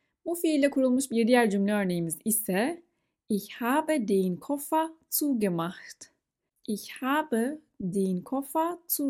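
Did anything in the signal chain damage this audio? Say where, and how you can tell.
No, no damage is audible.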